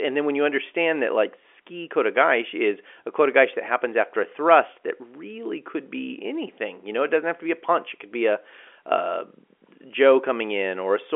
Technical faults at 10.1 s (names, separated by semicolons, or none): none